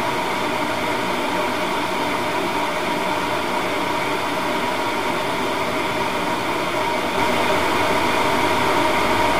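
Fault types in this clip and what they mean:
doubled audio track: from 7.18 s to the end, an equally loud full-band copy trails roughly 0.4 s behind, starting abruptly, without the decay or room colour of an echo.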